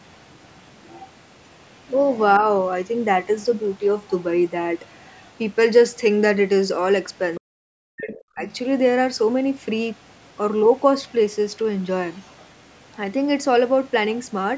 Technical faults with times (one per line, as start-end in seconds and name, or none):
0.88-1.04 other side's voice leaking through
4.85-5.31 other side's voice leaking through
7.35-7.40 other side's voice leaking through
7.38-8.44 speech suppressed in double talk
8.08-8.17 other side's voice leaking through
11.08-11.12 other side's voice leaking through
12.13-12.46 other side's voice leaking through